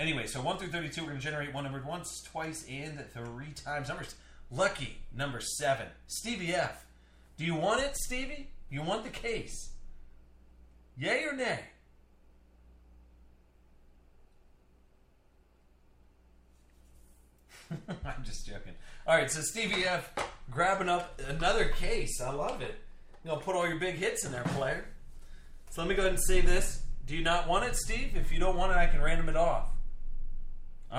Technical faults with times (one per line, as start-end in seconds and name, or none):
none